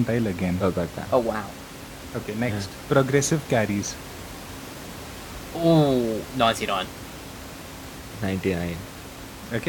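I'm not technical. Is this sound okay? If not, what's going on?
Yes, the sound is okay, and nothing is wrong with it. There is quiet background noise from the room where the microphone was, well below the speech, and that is just part of the recording.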